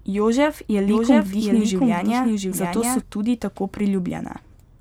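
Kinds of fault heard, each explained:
Doubled audio track: a full-band copy of the speech trails about 0.7 s behind, a few dB quieter, likely from a slower second capture path. The spectrogram shows the same patterns repeated with a time shift, and the copy stops abruptly before "tudi tako".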